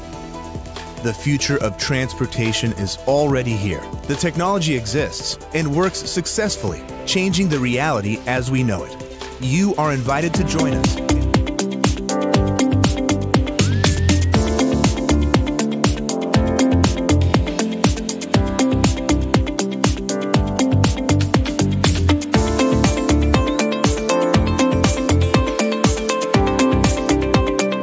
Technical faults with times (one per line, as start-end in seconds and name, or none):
none